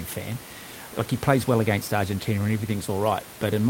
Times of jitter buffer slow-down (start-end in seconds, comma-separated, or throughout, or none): none